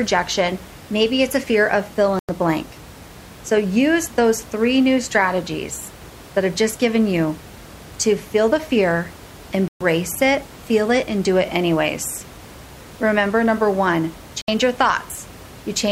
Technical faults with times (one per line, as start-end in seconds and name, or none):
2.19-2.29 digital broadcast dropout
9.68-9.81 digital broadcast dropout
14.41-14.48 digital broadcast dropout